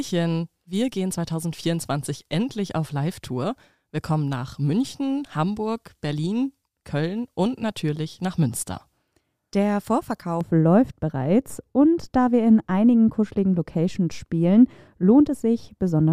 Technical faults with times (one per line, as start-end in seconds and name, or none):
10.41-16.12 de-emphasis applied wrongly